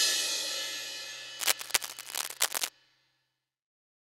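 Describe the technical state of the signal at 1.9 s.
At 1.9 s you're right in the middle of a burst of cable scratch noise that runs from about 1.39 to 2.69 s. It's a dense, uneven scratching and rustling sitting on top of the sound, a bit louder than the sound itself. The likely cause is a worn cable, connector or control being moved, so its contact resistance jumps around rapidly and dumps those ragged bursts into the signal.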